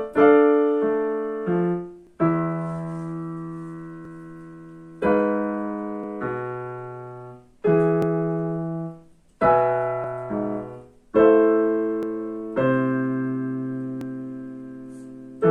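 Overlap between stream segments causes tiny skips at 2.07, 4.05, 6.04, 8.02 to 8.04, 10.04, 12.03 and 14.01 s. Every 2 s segment joins with overlapping time stamps, so milliseconds of genuine audio are cut and the waveform jumps. The skips never add a silent gap, unlike dropouts.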